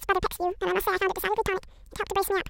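Throughout, the speech plays at double speed, an octave high. The audio was read two samples at a time, doubling speed.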